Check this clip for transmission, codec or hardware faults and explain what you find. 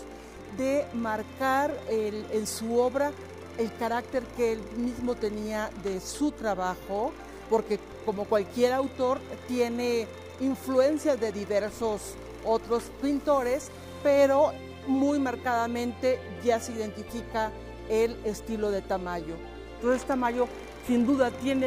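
No transmission, codec or hardware faults turn up anywhere in this clip.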